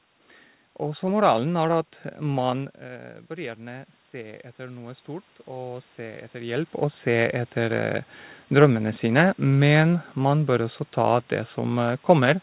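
A speech recording carried over a narrowband call path, with nothing above 4 kHz. It shows automatic gain rising from 3.34 s to 7.85 s: after the input level drops by about 12 dB, the gain control slowly adds about 8 dB. Unlike a talker simply moving closer, the room noise swells along with the voice over those several seconds.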